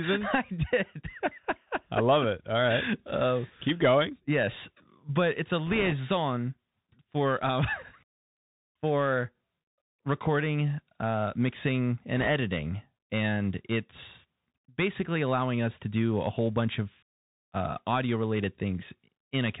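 Throughout, the Bluetooth CVSD headset codec is plainly audible. It cuts everything above 4 kHz, makes s sounds scratchy and leaves a grainy hiss, which fits a 64 kbps link. From 5.66 to 5.93 s, just after "but it's a", and again from 12.17 to 12.28 s after "recording uh mixing", bit errors on the Bluetooth voice link bring a rushing crackle instead of sharp clicks, since each flipped bit only nudges the waveform. The later burst, at roughly 3 percent errors against about 2, sounds rougher.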